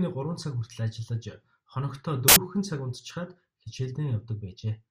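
At 2.28 s the speech breaks into loud, harsh broadband noise for about 80 ms, until 2.36 s. This is samples built from the wrong bytes. The reader assembled each sample's bytes wrongly, so the rapidly changing low bits became the dominant part of every value.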